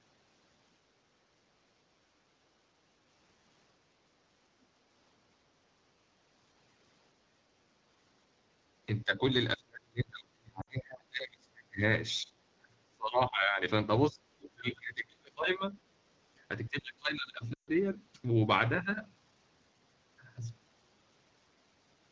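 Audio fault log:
9.04–9.22, 9.56–11.82, 12.22–13.62, 14.13–14.21, 14.37–15.76 and 16.69–17.39 s, speech suppressed in double talk: The echo canceller likely mistook this talker for loudspeaker echo while the far side was speaking, so it pulled this side down too. The voice sinks and breaks up in patches. The first brief dip is about 10 dB, the one near 14.1 s about 20 dB, the three long stretches at 9.56, 12.22 and 14.37 s fall by about 35 dB, almost to nothing, for one to two seconds at a time, and the last stretch drops about 25 dB for about 0.7 s.
10.61–10.68 and 17.54–17.70 s, lost AMR speech frames: Frames failed their radio checksum, and the wideband decoder patched each gap by repeating its last good pitch and vocal-tract settings at falling gain. The 60 ms gap, which fits three lost frames inside a suppressed stretch, drops to near silence within two frames. The 140 ms gap, which fits seven lost frames, also drops to near silence within two frames. 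The voice then returns briefly thin and rough.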